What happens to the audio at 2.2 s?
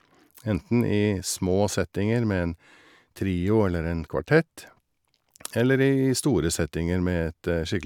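Nothing goes wrong at 2.2 s; the speech continues cleanly there, with no dropout, click, distortion or other fault.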